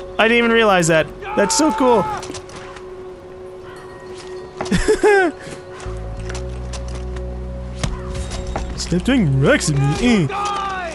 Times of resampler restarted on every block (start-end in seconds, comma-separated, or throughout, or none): 0.70-4.20